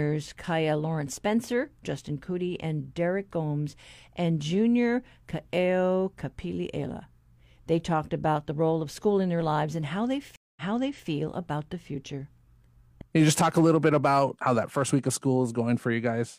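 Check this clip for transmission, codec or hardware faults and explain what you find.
One fault is present. At 10.36 s, after "lives and how they", the speech cuts to silence for 0.21 s, then resumes about 0.51 s earlier, repeating material until 11.08 s, before "about the future". This is a stream reconnect: the connection dropped, the player reconnected and restarted its decoder mid-stream, and the server resent a recent burst.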